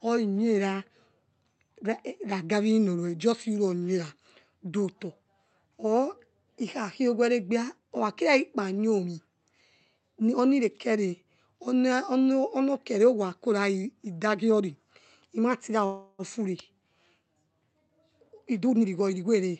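It's a speech recording over a call path, and the sound tops out around 8 kHz. At 15.85 to 16.22 s there's a call audio freeze: the last sound is stretched into a fading buzz for about 0.33 s, then speech resumes where it stopped, so nothing is lost but everything after lands a third of a second later. The likely cause is packets held up in transit, emptying the jitter buffer. Then from 17.89 to 19.48 s you get a jitter buffer speed-up: speech runs at roughly 117% with unchanged pitch and sounds hurried, as the receiver snips out tiny pitch-period chunks, around a third of a second in total, to claw back that built-up delay.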